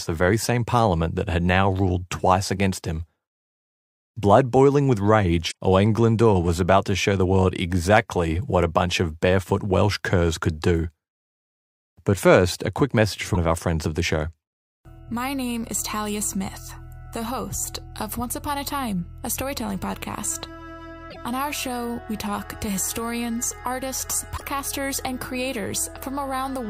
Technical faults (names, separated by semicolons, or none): damaged data in a compressed stream